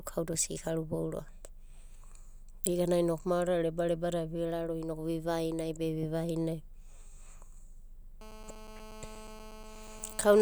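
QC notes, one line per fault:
8.21–10.37 s, GSM phone buzz: a nearby 2G phone on a call is transmitting its bursts about 217 times a second, and the audio circuitry rectifies those radio pulses, leaving a steady, hard, raspy buzz at 217 Hz, rich in harmonics and unrelated to the speech, sitting about 16 dB below it.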